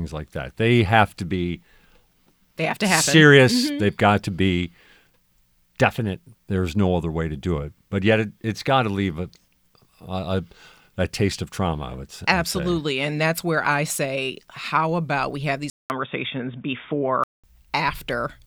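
After "how about we have", a 200 ms gap, then dull, boxy speech cut off above 3.6 kHz from 15.7 to 17.44 s, with a level shift and faint new hiss: likely an input switched to a poorer device.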